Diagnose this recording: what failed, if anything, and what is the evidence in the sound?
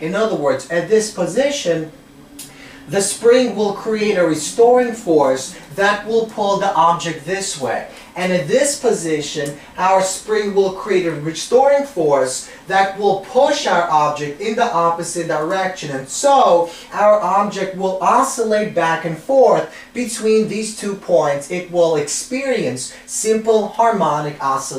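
Nothing in the recording stood out as a fault on listening, so there is no failed stage to point to.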